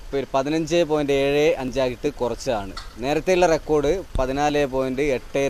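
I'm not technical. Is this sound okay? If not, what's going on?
No, not quite. There are two sharp little clicks, one at 1.68 seconds and another at 4.49 seconds. These are most likely dropped samples: a sliver of audio, just under a thousandth of a second, went missing. The sound then jumps straight to a later point, and that sudden step is what you hear as a click. Nothing actually gets cut out that you'd notice; it's just those two ticks.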